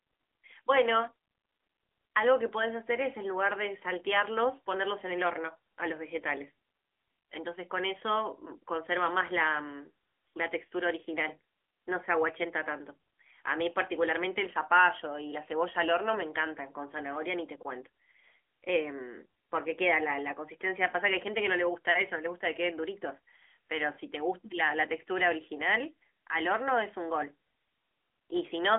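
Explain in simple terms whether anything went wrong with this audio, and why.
Something did go wrong, and it lasts the whole recording. The speech has passed through the AMR narrowband mobile codec, the kind used for 2G and 3G phone calls. It keeps only a narrow slice of sound, roughly 300 Hz to 3.4 kHz, and nothing above 3.6 kHz survives. So the voice sounds thin and muffled, like an old phone line. The codec rebuilds speech from a simple model, which leaves a plainly audible buzzy, artificial edge throughout.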